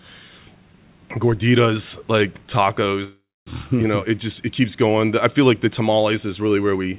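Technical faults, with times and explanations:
3.04 to 3.49 s, call audio freeze: right after "gorditas like" the sound stalls. The last fragment is stretched into a fading sound, then about a quarter second of silence, and the speech resumes with "you know" exactly where it left off. The likely cause is packets held up in transit draining the jitter buffer, so the receiver invented roughly 0.42 s of filler. Nothing was lost, but everything after this point arrives about 0.42 s late. The narrow band-limited sound of the call path, with nothing above 4 kHz, is consistent with a 64 kbps G.711 A-law link.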